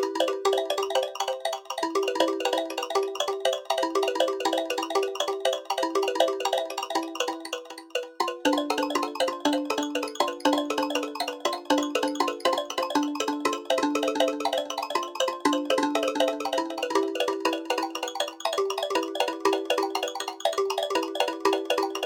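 From start to finish, every sound arrives twice: a doubled audio track, with a full-band copy trailing the original by roughly a third of a second at about 5 dB lower. The repeat is dry and flat, carrying no decay or room colour, so it reads as a stutter rather than an echo. It is likely a second capture through a slower path. On a waveform each transient is shadowed by a smaller twin; a spectrogram shows every event duplicated at identical frequencies, offset in time.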